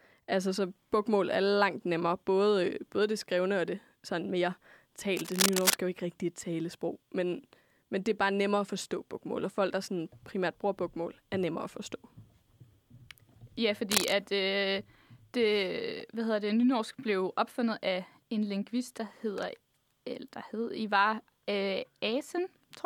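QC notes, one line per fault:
5.16–5.74 s and 13.91–14.14 s, cable scratch noise: two bursts of dense, irregular scratching and rustling sit over the speech at roughly the same loudness as the speech, the first ending just before "er jo ikke rigtig". This is likely a worn cable or connector being moved, its contact resistance jumping about. The grainy, uneven texture sets it apart from isolated digital clicks or the low thump of mic handling.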